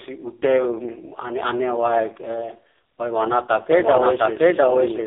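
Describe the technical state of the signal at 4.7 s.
At 4.7 s the speech sounds buzzy, thin and synthetic, with nothing above about 3.6 kHz and the low end rolled off below about 300 Hz. This is the AMR narrowband mobile codec, present for the whole clip. It rebuilds speech from a vocal-tract model driven by sparse pulses in 20 ms frames. The damage here is heavy, which fits its lowest 4.75 kbps mode, so the voice loses natural texture and gains a coded rasp.

The same moment also falls inside a doubled audio track that runs from 3.69 s to the end. A second copy of the speech plays at roughly the same loudness, trailing by about seven-tenths of a second. It sounds like two overlapping, out-of-step passes of the same material rather than an echo, because the copy has no decay or room colour and began abruptly at 3.69 s. The likely cause is the signal being captured twice, once through a slower path, or an edit holding two offset copies.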